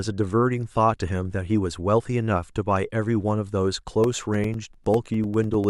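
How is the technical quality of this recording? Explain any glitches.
The recording has one glitch, in its last second and a half. Periodic USB or driver dropouts run from 4.04 s to 5.64 s. Something on the system stalls the USB bus or the audio driver every 0.1 s, and each stall drops a sliver of the speech, around 2 ms, which is replaced with silence. About fifteen of these gaps occur at a steady ten per second, heard as an evenly spaced ticking over the speech in that stretch.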